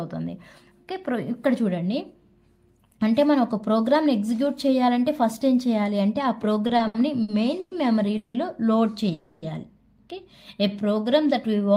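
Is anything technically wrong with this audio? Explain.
Yes, there are three kinds of network-related fault.

From 6.67 to 7.73 s the audio catches and drags through five brief hitches, the longest 110 ms, filling about a quarter of that stretch. This is repeated stalls (stutter): late packets kept draining the jitter buffer, and the receiver padded each gap by extending the last sound, losing nothing.

At 8.17 to 8.36 s and again at 9.13 to 9.44 s the sound hangs as a continuing buzz or hiss for about 170 ms and 290 ms, without dropping to silence, then resumes where it stopped. Each is a call audio freeze, likely caused by packets held up in transit emptying the jitter buffer.

From 10.57 to 11.74 s the audio runs slower at unchanged pitch, at about 91% speed, with sounds drawn out. This jitter buffer slow-down came from the receiver repeating single pitch periods or bits of pauses to rebuild its reserve, adding 109 ms.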